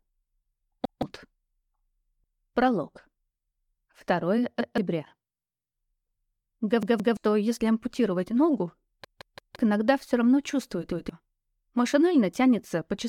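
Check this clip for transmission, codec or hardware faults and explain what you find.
Repeated buffer faults occur five times, at 0.85–1.02 s, 4.61–4.78 s, 6.83–7.17 s, 9.05–9.56 s and 10.92–11.09 s. Each time, fresh audio reached the output late, so the device replayed its last block of about 171 ms, which fits an 8192-sample buffer. That block plays twice at the first, second and fifth points, three times at 6.83 s and four times at 9.05 s. The result is a stutter with a hard seam at each repeat, and roughly 150 to 500 ms of the original material is skipped.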